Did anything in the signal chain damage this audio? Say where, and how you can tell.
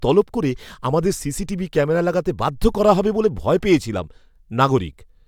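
No, nothing in this speech recording stood out as damage from any stage of the chain on listening.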